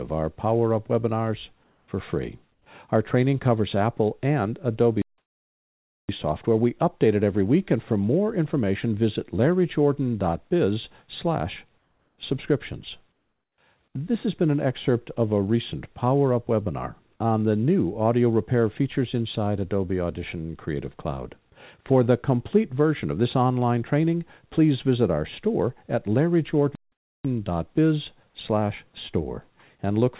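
Comfort noise in place of the background appears in four quiet gaps: 1.64 to 1.88 s, 2.52 to 2.66 s, 11.78 to 12.18 s and 13.12 to 13.58 s. The background there sits roughly 43 to 50 dB below the loudest sound. In each gap the real background, with its small fluctuations, gives way to a flat, even hiss. This is likely because the sender's activity detector stopped transmission and the receiver synthesised noise to fill the gap. The hiss matches the background level in the first gap, then drops about 6 dB, about 3 dB and about 8 dB in the later ones. On a spectrogram, each patch shows as a smooth, textureless band with no fine detail. Because the audio comes through a narrowband call path, nothing appears above 4 kHz. On the waveform, these stretches are a uniform low fuzz.

A playback stall cuts the sound dead from 5.02 to 6.09 s, a silence of about 1.07 s, and again from 26.75 to 27.25 s, about 0.49 s. 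The likely cause is that the player ran short of data or its output thread was blocked, so nothing reached the output until it caught up. Both are heard as abrupt dropouts to true silence. The waveform shows a flat line, and the spectrogram shows a blank vertical gap with sharp edges.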